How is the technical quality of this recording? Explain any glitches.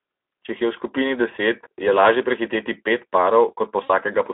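Quality is limited throughout by plainly audible low-rate codec coding, and one brief dropout near the end.

Speex codec, throughout: this CELP coder has few bits left for the excitation, which fits roughly 11 kbps. The speech comes out plainly hoarse and noisy, on a narrow line band of about 250 Hz to 3.6 kHz, with nothing above it.

VoIP packet loss concealed by the speech codec, 3.83 to 3.91 s: about 60 ms of audio went missing, which fits three lost 20 ms frames. The decoder stretched its last pitch and filter with falling gain, so the sound smears into a fading buzz or coloured noise. It recovers weakly because each frame builds on the last.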